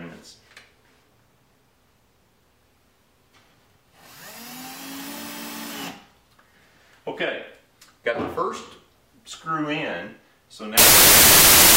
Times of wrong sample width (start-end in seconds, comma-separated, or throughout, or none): 10.78-11.77